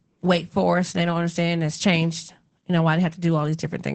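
Throughout, Opus voice compression leaves the speech muffled and hoarse, which fits SILK at about 12 kbps. A spectrogram shows a hard ceiling, with nothing above 8.6 kHz.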